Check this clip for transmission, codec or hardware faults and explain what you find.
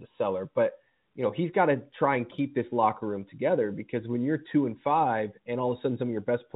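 Nothing here sounds like a fault; the speech just has the narrow, telephone-like character of G.711 coding, topping out below 4 kHz with at most a faint hiss that rises and falls with the level, which is how that line format normally sounds.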